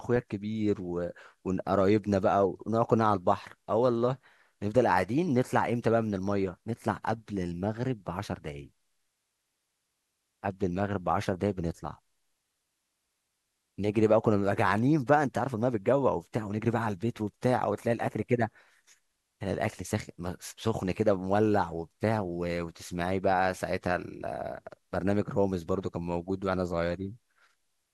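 Nothing in the speech recording stands out as a technical problem, with the signal holding steady and intact throughout.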